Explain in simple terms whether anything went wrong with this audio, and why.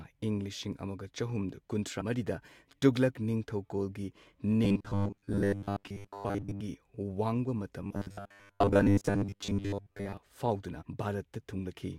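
At 2.0 s and again at 10.81 s, you hear compressed frames skipped: the speech jumps ahead by roughly 150 ms, then 200 ms.

From 4.65 to 6.61 s, right after "ꯇꯨꯘꯂꯛ ꯅꯤꯡꯊꯧꯀꯣꯜꯒꯤ", and from 7.82 to 10.17 s, the speech turns into a rigid 100 Hz metallic buzz. This is robotic sound from repeated short buffers, likely caused by about 10 ms chunks being replayed while most of the real audio is lost.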